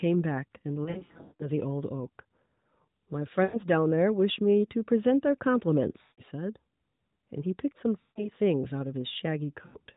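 Lost AMR speech frames break up the speech five times. From 0.84 to 1.50 s, about 420 ms of frames are missing, scattered over 560 ms with runs up to 180 ms. Further gaps fall at 3.44–3.61 s, 6.02–6.22 s, 8.02–8.29 s and 9.66–9.77 s, each 80 to 160 ms. When radio errors corrupted the frames, the decoder repeated the last good pitch and vocal-tract settings at falling gain. The sound smears into a drawn-out warble that fades toward silence, then returns weak and rough. On a spectrogram, harmonics run on unchanged and flat, then darken, all below the 4 kHz ceiling of the narrowband codec. The waveform shows repeated pitch cycles shrinking in amplitude.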